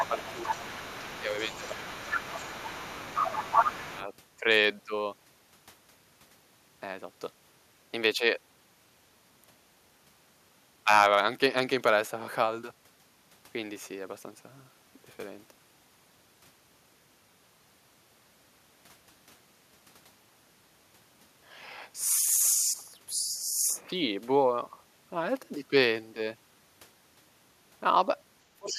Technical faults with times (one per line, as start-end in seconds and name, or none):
0.00-4.03 other side's voice leaking through
0.09-0.87 speech suppressed in double talk
1.20-2.48 speech suppressed in double talk
2.76-3.00 speech suppressed in double talk
3.89-4.01 speech suppressed in double talk
28.54-28.79 speech suppressed in double talk